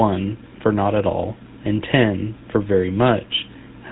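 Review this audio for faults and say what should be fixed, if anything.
GSM full-rate codec damage throughout: a vocal-tract model driven by coarse, regularly spaced pulses leaves the speech buzzy and gravelly, with nothing above 4 kHz, which fits 13 kbps coding. To prevent it, capture or route the speech through a wideband path instead of a GSM voice channel.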